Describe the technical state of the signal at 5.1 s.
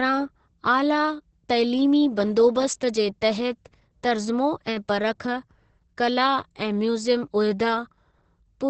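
At 5.1 s the speech carries Opus voice compression, present across the whole clip. Nothing sounds above about 8.5 kHz. The coarse linear-prediction coding of a wideband SILK mode leaves the voice muffled, hoarse and faintly robotic, which fits a bitrate near 10 kbps.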